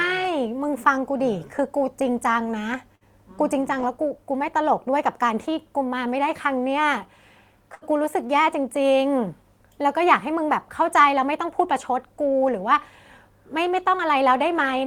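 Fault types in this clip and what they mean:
Burst of packet loss: several packets in a row were lost at 2.95 s and 7.75 s, so the last sound is held and faded for 53 and 63 ms, then speech jumps ahead with 60 ms gone. A single lost packet gives a shorter, barely noticeable fill.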